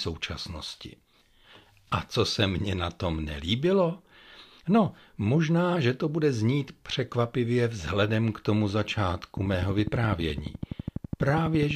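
From 9.37 s to 11.72 s a train of clicks ticks through the speech at a regular 12 per second, about thirty pulses peaking roughly 10 dB above it, likely interference from nearby equipment.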